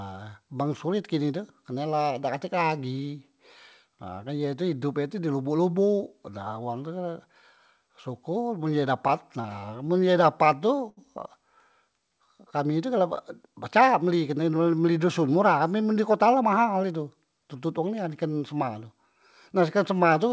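Speech carried over a call path, with nothing above 8 kHz, which fits a wideband codec such as G.722. From 9.08 to 10.99 s there are repeated stalls (stutter). The jitter buffer ran dry eleven times, and each gap was filled by stretching the last sound, the longest about 77 ms. From 13.47 to 14.30 s a jitter buffer speed-up plays the speech about 7% fast at unchanged pitch. Roughly 70 ms of pitch periods were cut to reduce excess delay.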